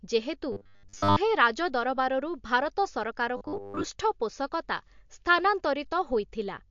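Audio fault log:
throughout, MP3 compression: treble cut at a fixed frequency, with plainly audible watery smearing, likely from low-bitrate encoding; the spectrogram shows a hard ceiling and flickering upper bins.
0.52–1.17 s and 3.37–3.84 s, robotic sound from repeated short buffers: a rigid 100 Hz metallic buzz as 10 ms segments loop over most of the audio, likely from late buffer delivery; the waveform shows identical repeating cycles.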